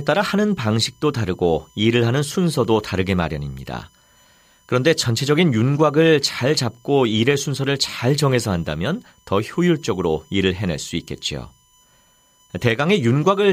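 A thin, steady whine sits under the speech from start to finish, pitched at 1 kHz with its strongest component at 3 kHz, roughly 40 dB below the speech itself. This is USB whine: the bus pulls current in regular 1 ms frames, and that pulsing draw leaks into the audio path through shared power or ground, leaving a fixed tone at the frame rate and its harmonics.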